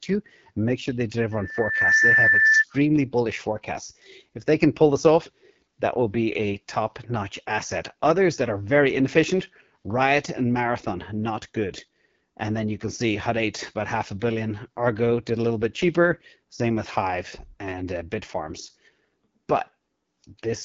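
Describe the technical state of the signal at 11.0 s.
At 11.0 s the speech is still passing through an AMR wideband (HD Voice) codec, as it does throughout. The low bitrate, which fits about 8.85 kbit/s, leaves too few pulses to model the voice, so it sounds rough and raspy, and nothing is heard above about 7.3 kHz.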